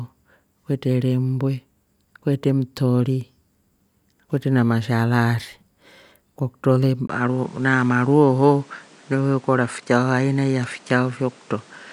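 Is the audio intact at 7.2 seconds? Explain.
No. At 7.2 seconds the speech is inside an input switched to a poorer device fault. It runs from 7.07 seconds, right after "kwa kutro le", to the end at 11.93 seconds. A brief 20 ms silence marks the switch. After it, nothing above 10.5 kHz comes through, so the speech sounds duller. A new noise floor sits about 30 dB below the speech. The level stays roughly the same. The likely cause is the recording moving to a narrower-band microphone mid-take.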